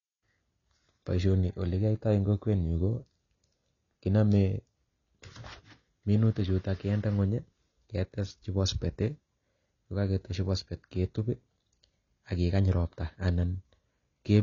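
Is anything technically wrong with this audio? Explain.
Yes. Throughout the speech, nothing is present above 7.1 kHz, and the audio sounds dull and smeared with plainly audible codec damage. This is likely AAC compression, with AAC-LC quantising spectral lines coarsely at a rate that fits roughly 24 kbps. A spectrogram would show a flat ceiling at 7.1 kHz.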